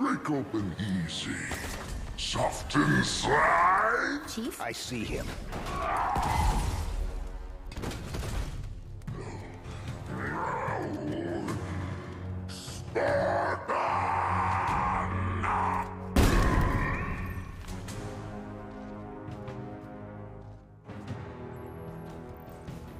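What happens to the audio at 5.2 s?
Nothing goes wrong at 5.2 s; the audio passes through that moment intact, with no dropout, click, distortion or other fault to be heard.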